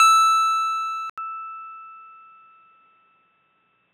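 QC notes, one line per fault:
1.10–3.93 s, input switched to a poorer device: after an 80 ms gap the music turns dull, with nothing above 3.8 kHz, at the same loudness but over a faint new noise floor, likely a narrower capture path. The gap and fresh background distinguish it from simple filtering.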